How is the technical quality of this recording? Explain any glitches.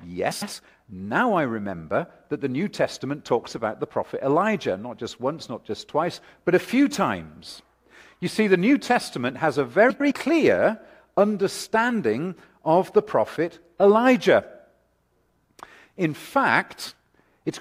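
The recording has two brief glitches, both frames out of order, at 0.31 to 0.53 s and 9.90 to 10.12 s. Two adjacent runs of frames, each about 105 ms and consistent with four frames apiece, were decoded in swapped order. Each stretch plays its halves reversed, a garbled flutter but no lost time.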